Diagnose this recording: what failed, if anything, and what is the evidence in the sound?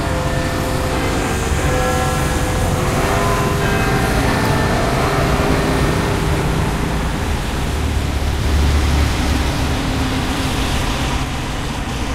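From 8.43 s to 11.23 s each sound repeats about 300 ms later at roughly equal level, dry and full-band, starting and stopping abruptly. This doubled audio track likely comes from the capture or editing stage: a slower second path, or two misaligned copies.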